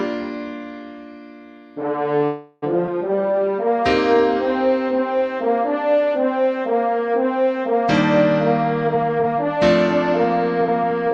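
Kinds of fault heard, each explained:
Call audio freeze: at 2.25 s the sound stalls into a fading buzz for about 0.37 s, then resumes where it left off, likely from delayed packets draining the jitter buffer.
Skip ahead: around 2.86 s playback jumps forward, dropping roughly 150 ms of audio with almost no gap, so the two sides butt together.
Jitter buffer slow-down: from 3.16 to 4.19 s the receiver repeats tiny pitch-period slices, adding 127 ms, so things drag at 88% speed with unchanged pitch.
Jitter buffer speed-up: short pieces get cut to shed delay, about 300 ms between 8.84 and 9.57 s at 136% speed, sounding hurried, then a gentler 104% from 10.23 to 11.07 s.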